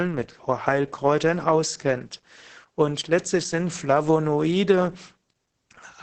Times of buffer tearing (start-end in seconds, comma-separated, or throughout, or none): none